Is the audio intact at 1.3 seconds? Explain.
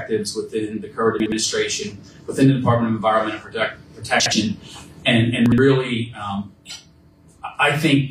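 No. From 1.2 to 1.32 s the sound jumps and stutters briefly, as though a tiny slice has been shuffled. This is chunks out of order: within that 0.12 s window, a 60 ms chunk of audio arrived one chunk late and plays after the chunk that should follow it. Nothing is missing, but the swapped pieces create three abrupt joins, which produce the jumbled moment.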